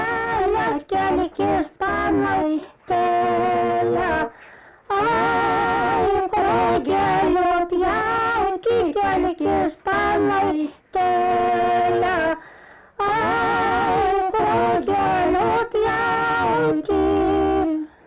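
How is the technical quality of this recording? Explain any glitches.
The technical quality of this recording is sound, with no glitches to explain.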